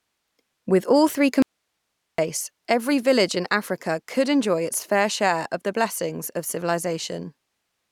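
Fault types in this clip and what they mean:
Audio dropout to a faint residue: after "all three" the speech cuts abruptly for about 0.76 s, leaving only hiss far below the speech level, then returns at "every village in". The likely cause is a lost signal feed while the downstream path stayed live. The waveform shows a sharp-edged flat gap, and the spectrogram a dim band of broadband noise.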